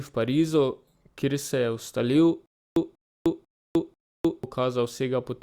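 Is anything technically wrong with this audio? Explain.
Yes. From 2.46 to 4.44 s the speech stutters with silent gaps: a 189 ms fragment repeats four times, each followed by 305 ms of silence, every 494 ms. The likely cause is a stalled stream replaying its last fragment at each retry, so the audio due then is lost.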